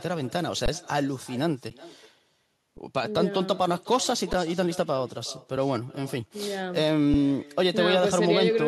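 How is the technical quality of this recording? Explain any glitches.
The recording has two problems: a constant echo and a handful of tiny dropouts.

There's echo with no canceller the whole way through. The far end's loudspeaker leaks back into its microphone and nothing removes it, so every phrase comes back about 20 dB quieter and thinner, roughly four tenths of a second behind.

Then there are five brief underruns with held sample, at 0.66 to 0.68 s (20 ms) and at 1.70, 2.77, 4.33 and 7.14 s (5 to 10 ms each). The playback buffer ran dry and the converter froze on its last value, so the speech just flattens for a moment. Nothing gets skipped, so it resumes softly.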